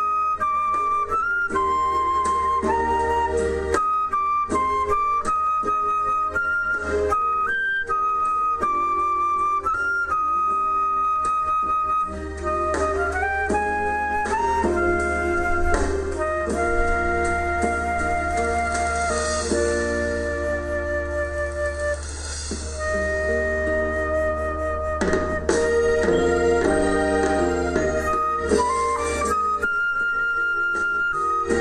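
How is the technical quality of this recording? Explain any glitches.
The recording has one glitch: from 0.11 s to 31.51 s, regular ticks recur about every tenth of a second. These are clock slip clicks, likely from two unsynchronised devices drifting by roughly 200 ppm and dropping or repeating single samples.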